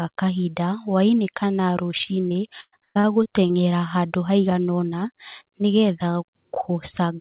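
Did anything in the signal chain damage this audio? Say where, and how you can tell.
Yes, at the network stage: repeated packet loss (robotic sound) from 1.98 to 3.55 s. About ten holes, the longest 117 ms, were patched by extending earlier sound, so roughly a quarter of that span is filler. The spectrogram shows smeared, repeated frames below the 4 kHz call-band ceiling, and the waveform shows looped chunks.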